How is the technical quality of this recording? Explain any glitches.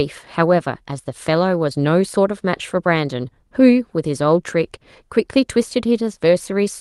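The technical quality holds up, and there are no glitches in this recording to explain.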